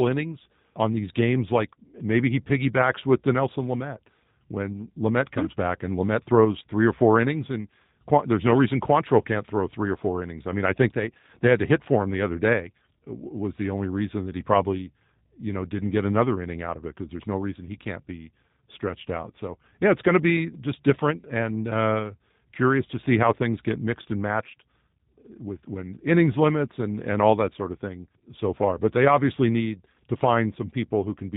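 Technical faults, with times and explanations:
Throughout, G.729 codec: the speech is rebuilt each 10 ms from a vocal tract filter, a pitch predictor and a few sparse pulses, so it sounds plainly rough and synthetic, with nothing above 4 kHz. This fits an 8 kbit/s G.729A coder.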